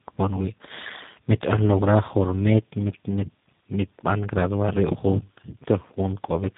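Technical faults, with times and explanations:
Throughout: tandem speech coding. The speech sounds rough, muffled and warbly, worse than one narrowband link would make it. It fits three speech codecs in a row, such as GSM full rate and then G.729A. Each one decodes and re-encodes the damage left by the last, so the errors stack. Nothing is heard above 3.8 kHz, which dulls the consonants. The repeated model fitting adds the warble and grit.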